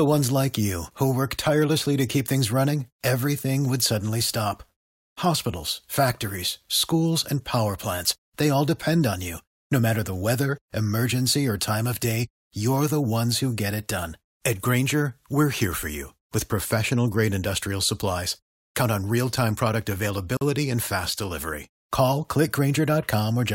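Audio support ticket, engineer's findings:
Separately encoded pieces joined untrimmed at 20.37 s: encoder start delay and last-frame padding left in. About 43 ms gap opens mid-speech, smeared edges, speech resumes where it stopped.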